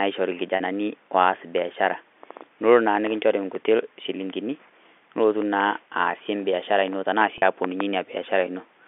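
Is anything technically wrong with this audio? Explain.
Yes. Packet loss with pitch repetition at 0.56 s, just before "oas biashara", and at 7.38 s, right after "aasie embiashara ino tanaa". Each time about 40 ms of audio went missing, which fits two lost packets. The receiver filled each gap by repeating the last pitch period, so the speech briefly sounds held and buzzy before it continues within the telephone-band G.711 sound.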